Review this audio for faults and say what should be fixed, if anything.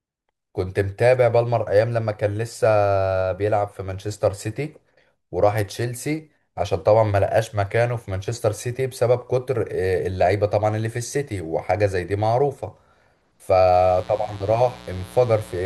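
From 13.73 s to the end at 15.65 s there's mains buzz, a raspy 60 Hz hum with harmonics, roughly 20 dB under the speech, from switching spikes leaking in. Keep dimmers and chargers off that circuit and use shielded, balanced cabling.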